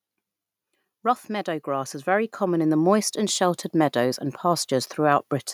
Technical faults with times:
0.89-5.01 automatic gain rising

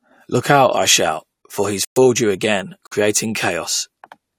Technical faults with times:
1.85-1.98 corrupt frame muted
2.87-2.93 corrupt frame muted

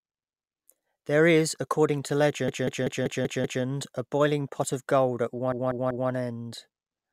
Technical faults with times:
2.48-3.63 repeated frames
5.52-6.09 repeated frames

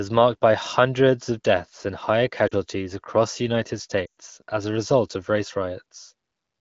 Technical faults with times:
2.47-2.55 lost AMR speech frames
4.05-4.20 lost AMR speech frames

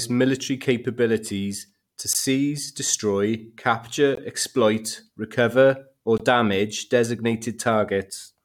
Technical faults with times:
2.13 gap between stream segments
4.15-4.18 gap between stream segments
6.18 gap between stream segments

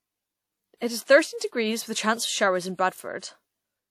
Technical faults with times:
1.38-1.41 pre-echo

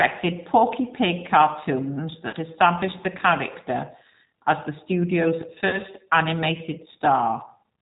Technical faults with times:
0.00-7.81 G.729 codec
2.29-2.36 VoIP packet loss concealed by the speech codec
5.69-5.79 VoIP packet loss concealed by the speech codec

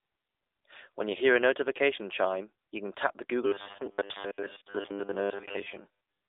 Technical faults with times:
0.00-6.29 AMR narrowband mobile codec
3.46-6.28 robotic sound from repeated short buffers

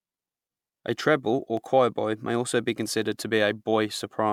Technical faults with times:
0.00-4.33 generation loss
0.20-4.33 clock drift buffer slips

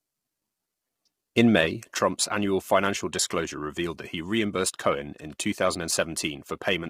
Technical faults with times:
0.00-6.89 low-delay AAC compression
1.99-6.89 one channel drops out

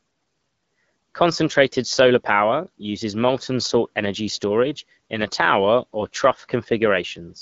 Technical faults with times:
none

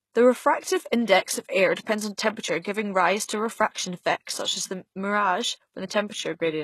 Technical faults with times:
0.00-6.63 HE-AAC compression
2.60-2.65 pre-echo

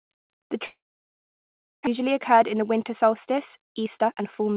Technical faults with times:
0.66-1.89 long network dropout
1.99-4.50 jitter buffer speed-up

